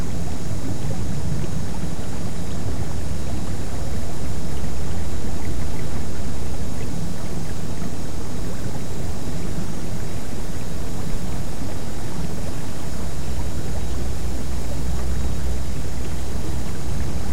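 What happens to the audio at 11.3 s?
Nothing goes wrong at 11.3 s; the sound carries on intact through that moment, with no dropout, click, distortion or other fault.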